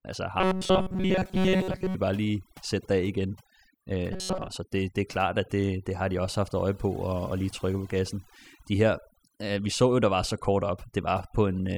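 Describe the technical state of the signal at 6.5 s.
At 6.5 s the background between sounds falls to near silence dotted with twinkling specks. That is overdone noise removal, present throughout: a noise reducer set too hard shuts off individual frequency bands near its noise estimate, taking quiet speech detail with them.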